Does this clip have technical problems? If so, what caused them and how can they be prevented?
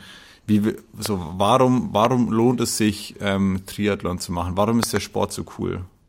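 Yes. Loud pops sit on top of the speech at 1.06 s, at 2.05 s just before "lohnt es sich ähm", and as a double pop from 4.83 to 4.99 s. They peak about 15 to 20 dB above the speech. The likely cause is voltage spikes from plugs, switches, static or a driver glitch. Secure the connections and avoid switching during recording.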